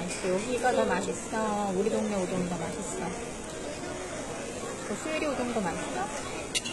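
From start to finish the treble sounds bright but false: the upper range has a gritty, metallic sheen that doesn't sit naturally on the lower part of the sound, and nothing at all comes through above 11.8 kHz. This is likely HE-AAC compression at a very low rate, around 16 kbps, heavily damaged, where only the lower spectrum is truly coded and the treble is rebuilt by copying lower bands upward, so its detail never matches the original.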